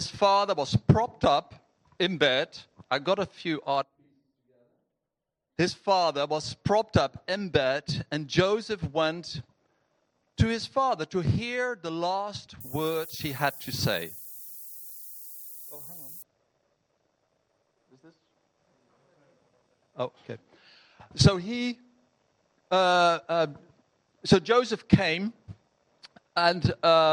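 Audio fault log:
12.61–16.22 s, low bit depth with noise shaping: for these three and a half seconds the signal is carried on only about 7 bits, and the rounding error that coarse quantisation leaves behind is steered upward by a feedback filter rather than spread evenly across the spectrum. The result is a constant, thin hiss sitting only modestly below the sound, around 15 dB down, and it grows markedly brighter and more prominent toward the highest frequencies, then stops when full resolution returns.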